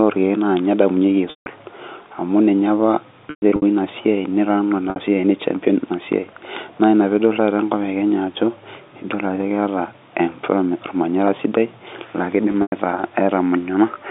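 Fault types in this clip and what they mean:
Packet loss with pitch repetition: parts of the speech stream never arrived, and the receiver filled each gap by repeating the last pitch period and fading it out. The shortest loss, 60 ms at 4.9 s, sounds like a briefly held, buzzy note. The longer ones, 160 ms at 1.3 s and scattered runs of up to 120 ms at 3.3 s and 12.52 s, fade toward silence before the speech cross-fades back in.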